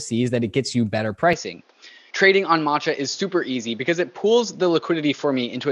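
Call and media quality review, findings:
Input switched to a poorer device from 1.33 s, just after "it gets you better", through the end. The sound goes dull, nothing above 6.9 kHz, with faint new background noise. No gap or level jump. Likely a mic or headset profile swap mid-call.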